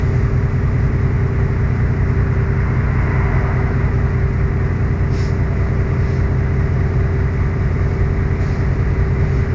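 No technical faults are audible anywhere in this audio.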